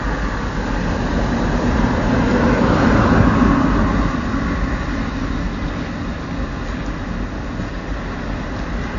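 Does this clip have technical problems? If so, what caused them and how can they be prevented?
Yes. The likely cause is AAC compression at a low bitrate, which fits about 32 kbps. Throughout, it cuts everything above 7.1 kHz and leaves the sound dull, smeared and warbly. To prevent this, encode at a higher bitrate or deliver the audio uncompressed.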